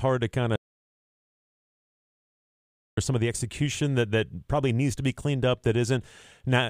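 At 0.56 s, just after "to kind", the speech drops out to silence and stays there until 2.97 s, where it resumes with "some of the execution". This is an audio dropout to silence: for about 2.4 s the gap holds plain silence, with no room tone underneath. The cause is likely a loss of the input signal while recording continued, so whatever was said in that span is unrecoverable.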